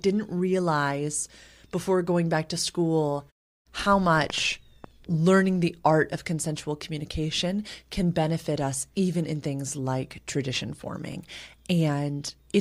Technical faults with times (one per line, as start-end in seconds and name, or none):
11.12-11.17 Bluetooth stutter